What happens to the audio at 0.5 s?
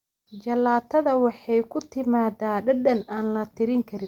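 At 0.5 s the speech plays through cleanly, with no dropout, click, distortion or other fault to be heard.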